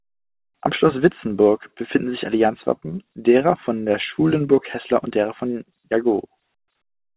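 No technical faults are audible.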